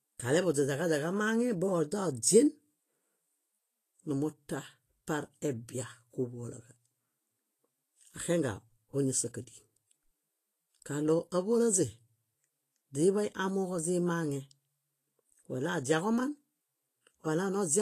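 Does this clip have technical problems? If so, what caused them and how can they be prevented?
Yes. Throughout the speech the upper frequencies sound hissy and grainy, with roughened tones and blurred consonant attacks. This is likely Vorbis compression at a low setting that fits roughly 32 kbps, where the treble is quantised so coarsely that fine detail turns into noise. A spectrogram would show a hard ceiling at 14.2 kHz and patchy, speckled energy in the upper bands. To prevent it, encode at a higher Vorbis quality or bitrate, and keep a lossless master.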